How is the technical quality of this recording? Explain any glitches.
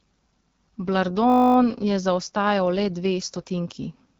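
The recording has two problems: a rough, bandwidth-limited codec sound throughout and a brief buzz near the start.

Across the whole clip the speech sounds raspy and grainy, with nothing above 7.5 kHz. This is the AMR wideband (HD Voice) codec at one of its lowest modes, which fits 8.85 kbit/s. At that rate its pulse-driven vocal tract model can't track the voice cleanly, and the top band is only shaped noise.

From 1.30 to 1.56 s, just before "je zaostajal le dve", the audio turns into a steady 50 Hz buzz. This is a system hang loop: the computer stalled while the sound hardware kept replaying one 20 ms buffer. Little if any audio is lost.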